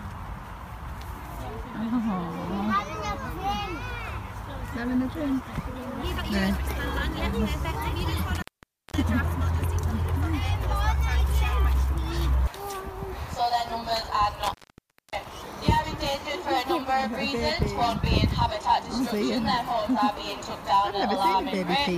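At 8.35 s the sound cuts out, and it cuts out again at 14.42 s. Both are intermittent contact: a loose cable or plug briefly opens the line. The gaps last about 0.52 s and 0.59 s. Crackle marks each break, and hiss fills the gaps.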